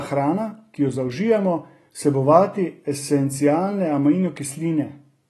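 Speech, with AAC compression audible throughout: nothing reaches above 12 kHz, and the remaining band sounds dull, with a smeared, warbling texture on sustained sounds and sibilants. That points to likely AAC-LC coding at a low bitrate, around 32 kbps, trimming and thinning the upper spectrum.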